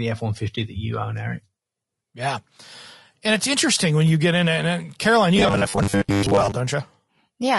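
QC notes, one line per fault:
throughout: low-delay AAC compression. The speech sounds rough and grainy, with noise filling the gaps between harmonics and a thin, synthetic top band. This likely comes from AAC-ELD at a low bitrate, fitting about 32 kbps. Short frames resolve pitch poorly and waste bits.
0.55–0.58 s: AAC frame loss with muting. The sound fades out and back in, leaving a brief dip of about 20 ms. That fits a single lost frame. The decoder zeroed its spectrum, and the overlapping windows smoothed the edges.
5.37–6.54 s: robotic sound from repeated short buffers. The speech becomes a rigid metallic buzz at 100 Hz that still loosely follows the words. The cause is likely a 10 ms chunk repeated to fill gaps while most of the real audio is skipped.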